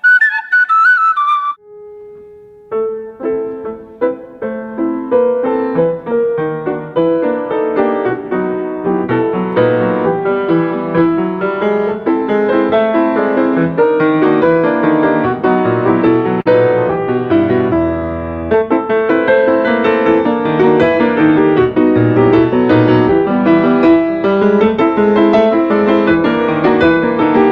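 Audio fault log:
16.41–16.47 s, short stall from a late packet: a packet failed to arrive on time and the jitter buffer ran dry, so the receiver held the last sound for 41 ms until the data turned up, then carried on from exactly where it stopped. Nothing is skipped, which separates this from a lost packet being concealed. Instead the sound hangs briefly, and the overall delay grows by 41 ms.
18.44–18.93 s, jitter buffer speed-up: the buffer held more audio than its target, so the receiver trimmed it by cutting out many short slices, each one or a few pitch periods long, in quick succession. About 50 ms is removed over half a second, so playback runs at roughly 108% speed and sounds hurried. The pitch stays the same, which distinguishes this from a simple resampling speed change.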